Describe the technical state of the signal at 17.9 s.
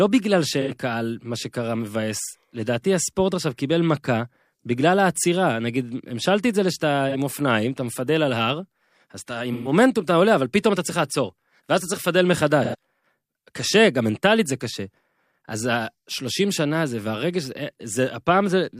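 At 17.9 s the audio is intact, with no fault to be heard in the signal at that moment.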